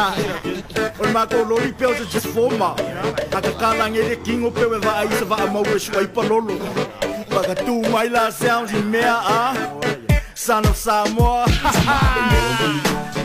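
At 0.56 to 0.62 s, 2.14 to 2.21 s, 3.30 to 3.35 s and 8.64 to 8.70 s, compressed frames are skipped: the sound jumps forward by roughly a fifth of a second (closer to 150 ms at 3.30 s), which fits a few whole frames of about 46.4 ms never reaching playback. Unlike a dropout, there is no gap of silence.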